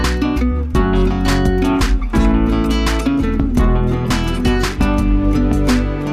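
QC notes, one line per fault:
No faults to note.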